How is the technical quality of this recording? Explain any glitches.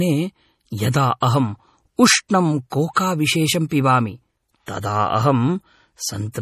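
Technical quality is poor, with plainly audible codec damage and one pre-echo.

MP3 compression is heard throughout. Nothing sounds above 14.6 kHz, and the speech has a watery, swirly texture. This likely comes from an MP3 encode short of bits, which fits a low bitrate near 40 kbps. The encoder cut the treble and dropped weak frequency lines frame by frame.

Pre-echo occurs from 2.94 to 2.96 s. A short hiss spreads for about 29 ms before a sharp attack, which sounds softened. The codec spread noise evenly across its block, so noise meant for the loud onset also filled the quiet moment just before it.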